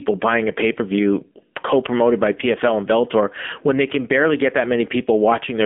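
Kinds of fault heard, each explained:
AMR narrowband mobile codec: The speech keeps only 200 Hz to 3.5 kHz. Coarse vocal-tract modelling makes it plainly buzzy, which fits a low mode near 7.4 kbps.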